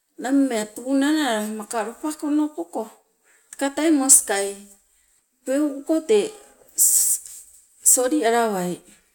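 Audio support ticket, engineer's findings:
No audible faults found.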